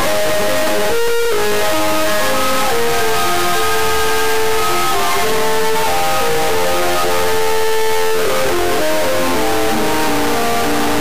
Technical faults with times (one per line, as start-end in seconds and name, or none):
0.00-11.01 integer read as float